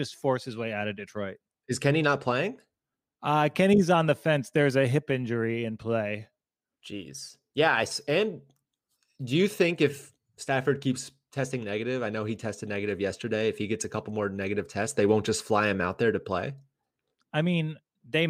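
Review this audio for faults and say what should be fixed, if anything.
Nothing stood out on listening to the speech, so there is nothing here that calls for fixing.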